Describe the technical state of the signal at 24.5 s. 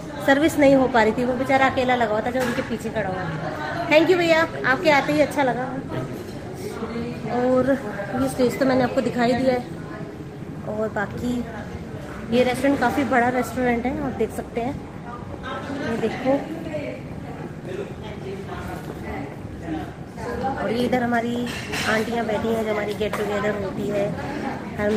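At 24.5 s the signal is intact, with no audible technical fault at that moment.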